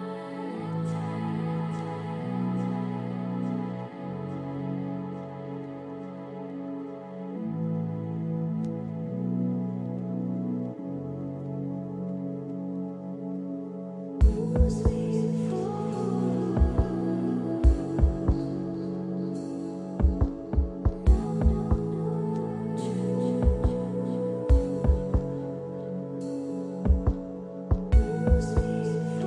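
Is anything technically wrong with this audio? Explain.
No, nothing stood out as technically wrong when listening to this audio.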